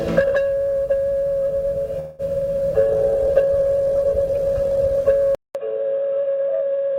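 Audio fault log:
1.99–2.22 s, call audio freeze: The music stops moving and its last sound hangs on as a fading buzz for about 194 ms. Late packets likely drained the jitter buffer. Playback then resumes where it left off, nothing lost, but about 194 ms later.
5.35 s to end, input switched to a poorer device: After a 200 ms silence the music returns dull and boxy, with nothing above 3.8 kHz. It is a little quieter, over a faint new noise floor. A change to a narrower-band input is the likely cause.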